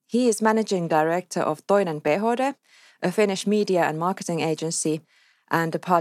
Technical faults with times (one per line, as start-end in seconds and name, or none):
2.07 block of digital silence
3.41 block of digital silence